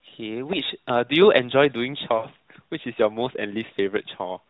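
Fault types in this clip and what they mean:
Lost AMR speech frames: from 2.18 to 2.28 s the decoder covered about 60 ms of corrupted data, which fits three 20 ms frames, by repeating its last pitch and vocal-tract settings at falling gain. The waveform shows a shrinking, drawn-out stretch, and the spectrogram shows frozen harmonics below 4 kHz fading out.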